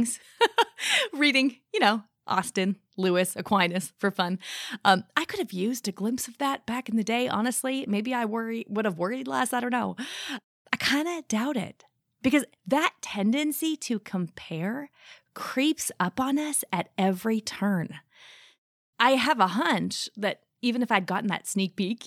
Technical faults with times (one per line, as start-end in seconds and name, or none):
none